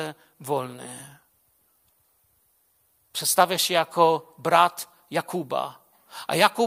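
From 0.75 to 6.08 s there are clock slip clicks, faint ticks roughly every 0.7 s, likely from two unsynced clocks drifting about 30 ppm apart.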